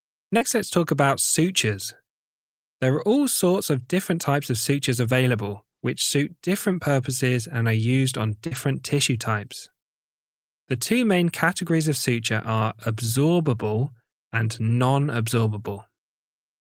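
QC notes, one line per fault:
0.37–0.43 s, 8.47–8.53 s and 9.69–9.73 s: short concealed packet loss. Audio arrived too late for the decoder, about 40 ms, 40 ms and 20 ms missing, so the receiver extended the preceding sound and blended back, heard as a brief smear or wobble where a short sound can drop out.
0.41–0.43 s, 3.83–3.85 s, 4.77–4.79 s, 8.51–8.57 s, 9.65–9.67 s and 13.79–13.85 s: lost packet rebuilt from error correction. Lost stretches of 20 ms, or 40 ms at 8.51 and 13.79 s, were replayed from the low-bitrate backup copy carried in the following packet, leaving no gap but a rougher, noisier patch.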